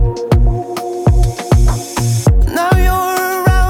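Nothing audibly wrong in this audio; no faults to report.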